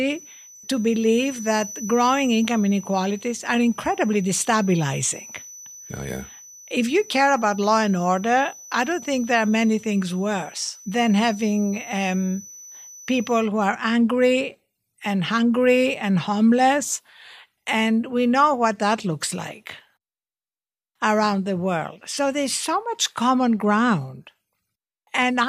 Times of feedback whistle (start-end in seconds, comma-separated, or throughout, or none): 0.00-13.51